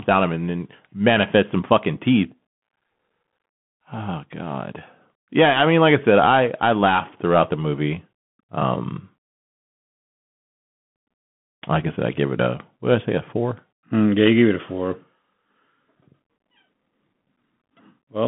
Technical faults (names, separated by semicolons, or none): Bluetooth CVSD headset codec